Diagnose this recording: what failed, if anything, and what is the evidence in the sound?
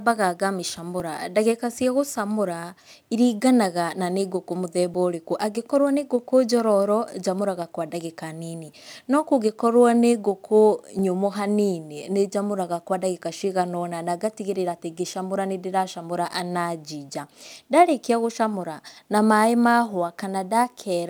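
Dropped buffer (overrun) at 1.0, 4.94 and 10.99 s: each is a jump where the speech skips ahead by roughly 10, 20 and 10 ms, with no silence. Likely driver or buffer stage: samples were overwritten before being read, splicing the surrounding audio together.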